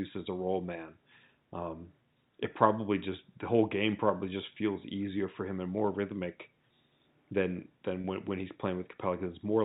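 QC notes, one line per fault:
8.01–8.04 s, packet loss with pitch repetition: about 30 ms of audio, which fits a single lost packet, is bridged by repeating the last pitch period, giving a brief held, buzzy tone just before "when when he's". The waveform shows repeating cycles that fade in level, and the spectrogram shows flat, steady harmonics under the 4 kHz G.711 band limit.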